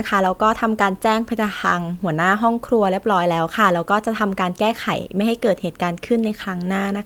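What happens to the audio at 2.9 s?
Nothing goes wrong at 2.9 s; the speech plays through that moment intact, with no dropout, click or distortion.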